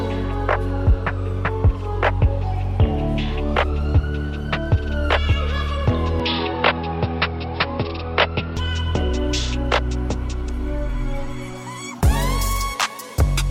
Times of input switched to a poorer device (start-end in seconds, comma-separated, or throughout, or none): 6.20-8.57